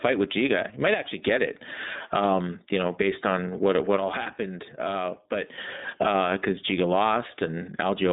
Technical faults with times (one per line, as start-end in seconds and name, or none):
0.00-8.12 iLBC codec
0.94-1.23 one channel drops out
3.97-5.58 one channel drops out